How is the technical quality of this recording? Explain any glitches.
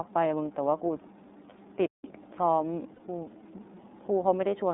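The quality is limited, with two audible problems. The whole recording passes through the iLBC codec. The band runs from about 200 Hz to 3.7 kHz, so it sounds thin and telephone-like. Each 30 ms frame is coded on its own. The result is plainly rough and slightly synthetic, which fits the 13.3 kbps mode.

From 2.94 to 3.01 s there are lost iLBC frames. About 60 ms of audio went missing, which fits two dropped 30 ms frames. The decoder filled the gap by repeating the last pitch cycle with added noise. It sounds like a brief held, buzzy vowel. The voice is right again almost at once afterwards.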